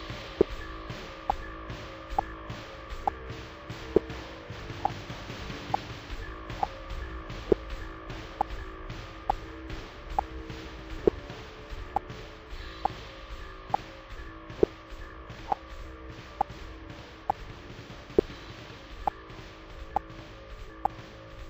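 Stereo read as mono runs through the whole clip, from start to finish. The left and right samples of an interleaved stereo stream were taken one after another as if they formed a single channel, so each moment of sound is stretched across twice as many samples. The result plays at 0.5 times normal speed and sits an octave low, 12 semitones down, giving these sounds a slowed, deepened, drawn-out character.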